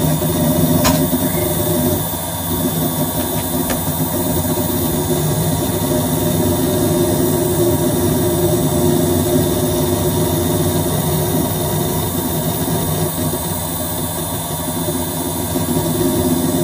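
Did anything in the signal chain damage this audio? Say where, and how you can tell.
Yes. Channel delay (comb filtering) runs through the whole clip, from the start to the end. One channel reaches the mono sum roughly 10 ms late, which points to a driver or buffer offset between channels before the downmix. Cancellation starts at a first notch somewhere around 40 Hz and repeats at regular intervals, so the sound is hollow and phasey. On a spectrogram this shows as fixed, evenly spaced dark horizontal stripes that never move.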